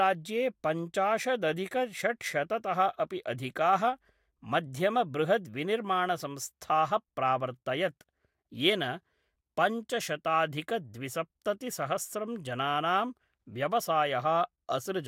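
No technical faults can be heard anywhere in the speech; the signal arrives continuous and intact.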